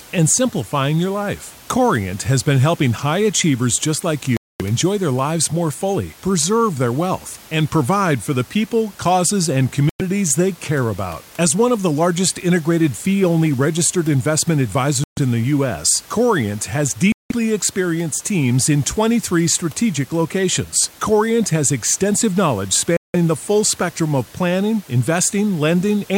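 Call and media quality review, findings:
Bluetooth stall at 4.37, 9.89, 15.04, 17.12 and 22.97 s: speech drops to silence for 105 to 232 ms, then resumes. Likely the headphone buffer running dry while interfered packets were resent.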